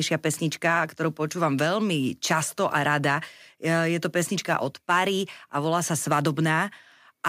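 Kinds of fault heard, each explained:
No technical faults detected anywhere in the recording.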